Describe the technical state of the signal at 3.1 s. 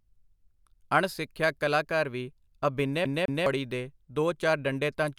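At 3.1 s the speech is caught in a CD stuck on one turn, running from 3.05 to 3.46 s. A scratch on the disc keeps throwing the laser back one track at the same point of each rotation. So the same 0.21 s stretch plays twice over, with a brief mute at each jump. The result is a quick, even stutter. Normal playback resumes with "ਦੇ ਦੋ".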